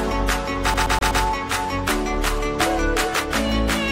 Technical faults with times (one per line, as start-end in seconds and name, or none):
0.74-1.23 CD stuck on one turn